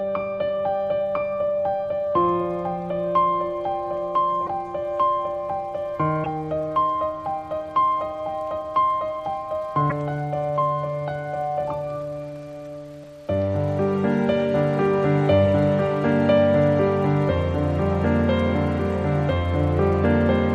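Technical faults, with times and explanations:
4.46–4.49 s, 6.23–6.26 s, 9.89–9.92 s and 13.02 s: broken MP3 bit reservoir. The audio glitches briefly and jumps ahead, likely because dropped 26.1 ms frames left following frames decoding another frame's reservoir bytes.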